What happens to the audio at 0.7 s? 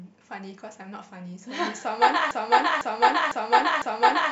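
Nothing happens to the audio at 0.7 s; the speech continues intact through that moment with no dropout, glitch or other fault.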